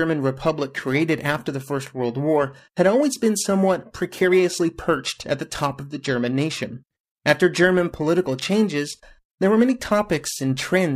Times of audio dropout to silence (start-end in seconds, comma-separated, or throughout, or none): none